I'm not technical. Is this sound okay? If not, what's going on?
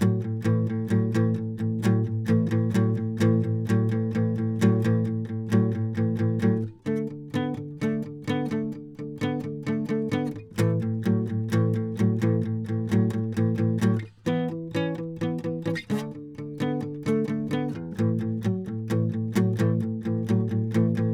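Yes, nothing stood out as a problem anywhere in this music when listening to it.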